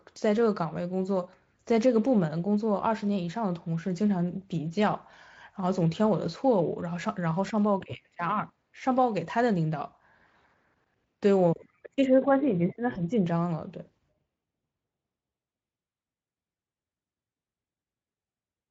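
VoIP packet loss concealed by the speech codec, 12.93 to 12.97 s: the Speex decoder extrapolated its last pitch and filter across a 20 ms gap, likely one lost frame, leaving a brief buzzy or noisy smear.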